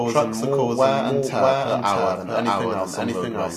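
Throughout, a doubled audio track: an equally loud copy trails about 0.7 s behind, likely via a slower path, lacking echo's decay and room colour.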